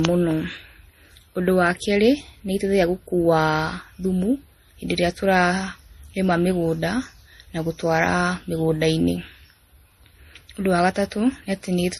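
A speech recording that is band-limited for its whole length, with nothing above 12.4 kHz, and carries a layered mix of coding artefacts from different codecs, heard together. The combination likely comes from transcoding between lossy codecs, with the character pointing to a chain of MP3, then Vorbis, then a final low-bitrate MP3 pass, each stage coding the previous one's damage and adding its own.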